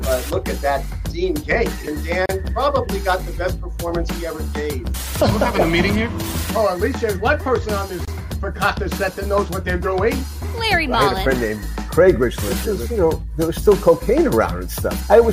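At 2.26 s and again at 8.05 s the audio stops for about 34 ms and 25 ms, a gap at a join of encoded pieces. Untrimmed encoder delay and end padding leave silence with smeared edges, but unlike a dropout, the sound resumes exactly where it stopped.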